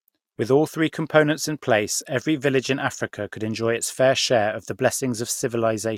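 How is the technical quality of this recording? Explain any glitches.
Nothing to flag here: the recording has no glitches to explain.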